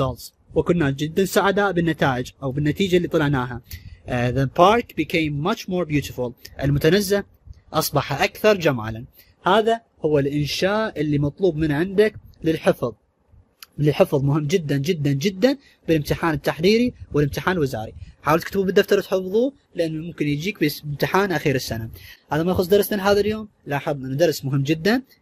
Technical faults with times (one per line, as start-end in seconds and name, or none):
0.00-25.22 MP2 compression